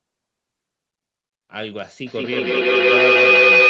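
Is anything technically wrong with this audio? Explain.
Yes. Feedback howl, 2.06 s to the end: a loudspeaker-to-microphone loop gains level each pass, building a tone near 3 kHz, about 14 dB over the speech, with the loop repeating roughly five times a second.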